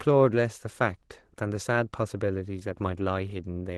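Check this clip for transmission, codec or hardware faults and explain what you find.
Nothing stood out on listening to this speech; the audio carries the character of an Opus call path, with its high end reaching to about 12 kHz.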